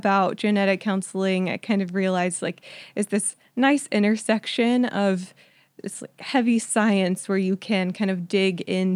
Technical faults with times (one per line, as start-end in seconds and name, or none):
none